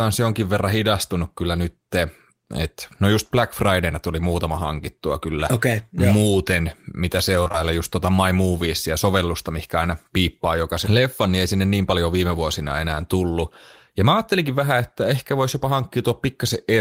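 Around 7.43 s, then 7.48 s and 7.52 s, there's a run of short concealed packet loss, three back-to-back gaps of about 20 ms each, pointing to 20 ms packets. The decoder bridged each one by extending the preceding sound, so the speech smears and wobbles briefly until 7.56 s.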